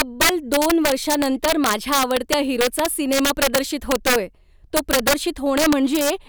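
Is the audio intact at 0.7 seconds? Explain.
No. Integer overflow runs throughout this speech. Gain pushed about 8 dB too far wraps peaks to the opposite sign, heard as sharp cracks on a small share of loud samples.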